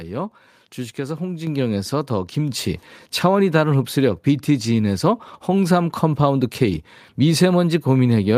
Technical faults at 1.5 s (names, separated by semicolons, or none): microphone volume stepped up